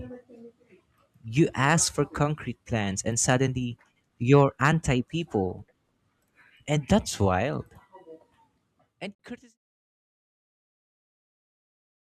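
At 9.15 s, a gap at a join of encoded pieces breaks the speech. A 46 ms gap runs to 9.19 s, inside the fade-out. Separately encoded pieces were joined untrimmed. Edges are smeared by the codec, and the speech resumes where it stopped.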